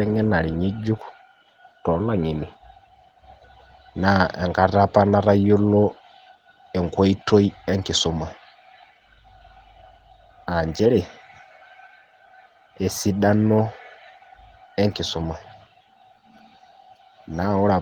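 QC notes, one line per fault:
Nothing to flag here, since the speech comes through the Opus voice coding at 20 kbps with only light coding damage and nothing on this clip needs a line of its own.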